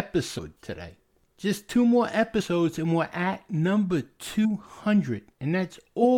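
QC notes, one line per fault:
0.37–0.39 s, 2.39–2.42 s and 4.44 s, compressed frames skipped: audio jumps forward about 100, 50 and 100 ms as whole frames, fitting roughly 23 ms frames, go unplayed.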